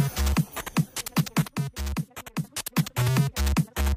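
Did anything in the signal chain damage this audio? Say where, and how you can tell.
Yes. One channel drops out, likely at a loose analogue connection, from 1.47 to 2.44 s: with one side of the stereo pair gone, the summed level falls abruptly by about 6 dB.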